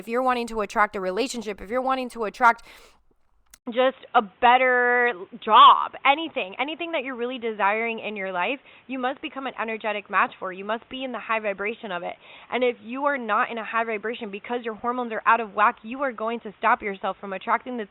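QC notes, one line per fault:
3.58 s to the end, input switched to a poorer device: after a gap of about 80 ms the speech turns dull and boxy, with nothing above 3.8 kHz, and a new background noise appears roughly 35 dB below the speech while the loudness stays about the same. The sudden loss of top end together with a different noise floor is likely the recording jumping to a narrower-band microphone or headset call profile mid-take.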